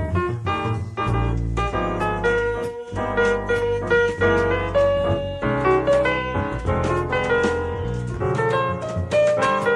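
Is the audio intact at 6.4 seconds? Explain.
Yes, the audio at 6.4 seconds is intact, with no dropout, click, distortion or other fault at that moment.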